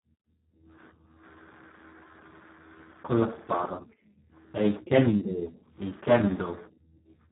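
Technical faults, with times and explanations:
Throughout, Speex codec: the speech sounds hoarse, noisy and partly robotic, which fits a very low Speex setting near 4 kbps, where too few bits remain to code the excitation. Nothing is heard above 3.9 kHz, so the sound is dull and narrowband.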